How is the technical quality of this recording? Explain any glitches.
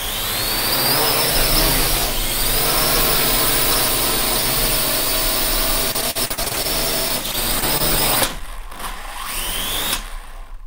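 The recording has two bursts of repeated packet loss (robotic sound). From 5.91 to 6.66 s and again from 7.08 to 7.82 s, packets arrived lost or late. Each hole was patched by stretching the previous sound, leaving choppy stutters.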